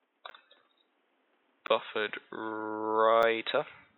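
At 0.3 s the sound drops into a block of digital silence for 10 ms. It happens again at 1.67 s, also 10 ms. A shorter one follows at 3.22 s, about 6 ms. Each time, samples were replaced by zeros. The likely cause is an output buffer that was not filled in time. The audio stops and restarts with no fade. Each gap is short enough to be heard as a tick or dip rather than silence.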